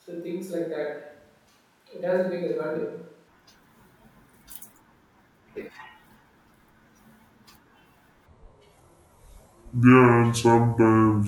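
From the first moment until 3.28 s, the speech sounds hollow and roomy. This is a switch to a distant microphone. The close microphone's signal is likely missing, so a mic further away carries the voice. Bass is thin. The level sits about 10 dB lower than the rest. Room noise sits roughly 35 dB under the speech. At 3.28 s the sound snaps back to a close, full tone.

From 8.26 s to the end, there is a section at the wrong speed. The audio plays at 0.614 times its recorded speed. Pitch drops with it, by around ten semitones. The voice turns deep, slow and dragging. The change arrives abruptly. The section was likely played against the wrong clock, so speed and pitch fell together.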